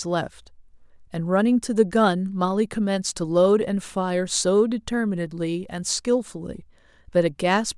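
Speech recording, no audible technical faults anywhere in the clip.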